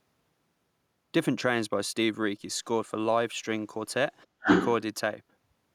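At 4.40 to 4.47 s, the echo canceller likely confused simultaneous talk with loudspeaker echo. This is speech suppressed in double talk, and it turns the speech down sharply by roughly 25 dB. From 4.46 to 4.67 s, the canceller likely failed to remove the loudspeaker signal, so the other side's voice leaks through, a few decibels louder than the speech.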